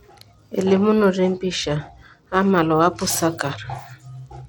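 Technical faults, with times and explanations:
Throughout, Bluetooth SBC compression: the speech has dull, flickering treble with a gritty grain and aliasing, likely from SBC coding starving the upper sub-bands of bits, consistent with a rate near 96 kbps. On a spectrogram, the highest band looks patchy, switching on and off in blocks.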